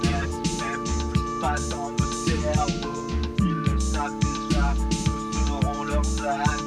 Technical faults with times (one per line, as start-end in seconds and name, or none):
none